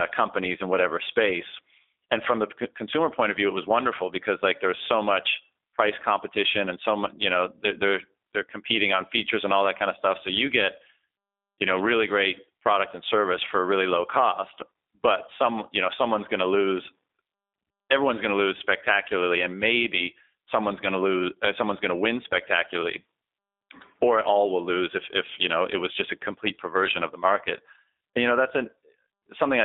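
G.729 codec damage runs through the clip. The speech is confined to a telephone band of 250 Hz to 3.7 kHz, and its plainly rough, synthetic texture fits an 8 kbit/s coder that rebuilds each 10 ms frame from a vocal tract filter, a pitch predictor and a few pulses.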